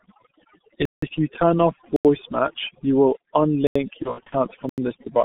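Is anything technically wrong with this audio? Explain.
Yes, several faults are audible.

Throughout, the background is pushed down and breaks up into twinkling specks. This is overdone noise removal, which pushed bands near the noise estimate down along with quiet voice detail.

Also throughout, the speech is muffled and hoarse with smeared consonants, confined to roughly 150 Hz to 3.7 kHz. That is the G.723.1 codec at 6.3 kbit/s, heavily damaging the signal.

At 0.85 to 1.02 s (171 ms), 1.96 to 2.05 s, 3.67 to 3.76 s and 4.69 to 4.78 s (85 ms each), the sound cuts abruptly to dead silence. These are blocks of digital silence, most likely from unfilled output buffers. The lengths fit buffers of 4096 and 8192 samples.

From 4.02 to 4.36 s, the voice is stretched into a fading sound, then stays weak or distorted. This is VoIP packet loss concealed by the speech codec. About 150 ms went missing across 300 ms, with runs up to 60 ms, so the decoder extrapolated and faded its last pitch and filter.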